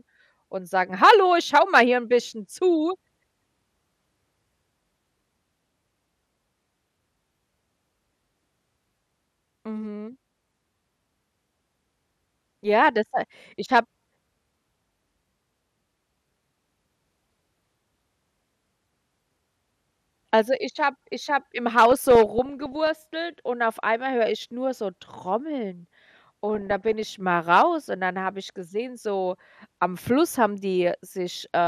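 DAB burbling hits this speech recording at 21.92–22.87 s, after "habe ich habe im", and at 26.55–27.03 s, before "mal raus und dann". Bit errors of roughly 0.4 and 0.5 percent escape error correction and corrupt MP2 sub-band samples, producing short noise blips in single sub-bands.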